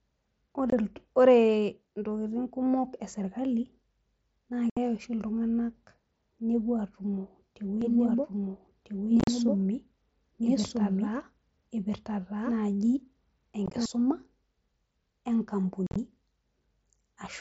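At 0.70 to 0.73 s there's a first short hole from unconcealed Bluetooth headset packet loss: about 22 ms of the speech just drops out between headset and phone, with hard edges. A longer one follows at 4.70 to 4.77 s, roughly 68 ms gone in one clean gap. Those lengths fit whole mSBC packets of 7.5 ms going missing, and the band-limited sound, topping out near 8 kHz, matches that link.

From 7.8 to 13.9 s you get a doubled audio track. A second full-band copy of the speech runs about a second and a half behind, at roughly the same level. There's no decay or room tone on it, so it's not an echo. More likely it's the same signal captured a second time through a slower path. It cuts in and out abruptly at those edges.

Inside that stretch the packet loss changes character. Around 9.20 to 9.28 s about 60 ms of audio is lost in scattered pieces over a 75 ms window, with the longest run near 38 ms, so it sounds chopped and crackly rather than like one gap. 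At 13.66 to 13.74 s the same happens more lightly, about 38 ms lost across 75 ms. At 15.87 to 15.96 s it's heavier again, around 75 ms missing over 90 ms with a 45 ms run, a rough, stuttering tear.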